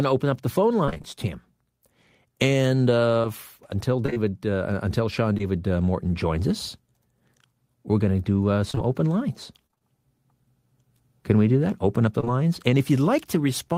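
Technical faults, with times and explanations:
0.85–1.06 s, 3.22–4.18 s and 8.71–9.82 s: repeated packet loss giving a robotic sound. Gaps of about 20–26 ms keep arriving, and each one is patched by stretching the last bit of audio. The first burst is the worst, with half of it filled in, so it goes choppy.
5.34–5.41 s and 12.20–12.28 s: short concealed packet loss. Each is two back-to-back 20 ms holes. The decoder papered over them by continuing the preceding sound and then blending back, which leaves a quick smear or wobble.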